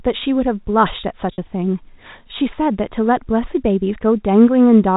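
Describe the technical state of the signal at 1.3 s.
At 1.33 to 1.38 s there's packet loss with pitch repetition: about 50 ms went missing, and the receiver looped the last pitch period, giving a briefly held, buzzy sound.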